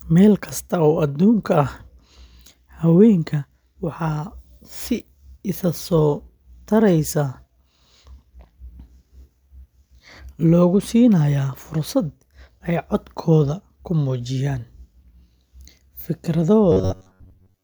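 Speech clip with robotic sound from repeated short buffers from 16.72 s to the end at 17.64 s: the voice collapses into a rigid metallic buzz near 93.8 Hz while loosely tracking the words. Most of that stretch is repeated material, likely from a roughly 10.7 ms buffer looping when fresh audio arrived too late.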